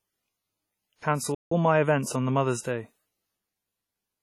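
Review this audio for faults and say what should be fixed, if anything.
The speech has WMA compression throughout, most likely from a transform codec run at a low bitrate, which fits something around 32 kbps. Its long blocks smear quantisation noise across tens of milliseconds and drop weak spectral lines, so the speech sounds heavily damaged: ringing, washy, with a hiss that swells and fades with the signal. Encoding at a higher bitrate, or with a better codec, would prevent this.

A playback stall runs from 1.35 s to 1.52 s. The likely cause is that the player ran short of data or its thread was blocked, so the output went silent for about 0.17 s before recovering. The speech halts in mid-flow for that gap and then carries on. A larger playback buffer, with decoding kept off threads that can be blocked, would prevent this.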